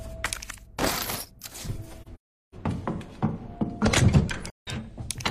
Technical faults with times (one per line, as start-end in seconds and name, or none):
2.01-2.55 AAC frame loss with muting
4.50-4.68 AAC frame loss with muting